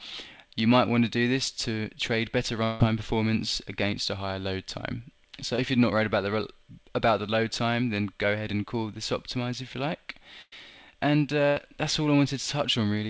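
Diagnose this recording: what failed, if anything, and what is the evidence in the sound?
From 2.64 to 2.81 s the sound is extended as a decaying buzz or hiss for about 160 ms and never falls to silence before the audio returns further on. This is likely a long network dropout. The receiver's concealment bridged the whole gap, so no silence remains.

At 5.56 to 5.59 s there is a brief smear lasting about 20 ms, which marks a short concealed packet loss. The decoder repeated the last waveform and blended back in. It is far too short to become the held buzz of a burst.

There are two bursts of packet loss, at 10.42 to 10.53 s with about 100 ms filled and at 11.49 to 11.57 s with about 70 ms filled. Each is a continuation of the last sound that fades and then skips ahead. The fade marks loss on the network, not a buffer fault, and nothing above 8 kHz reflects the G.722 call path.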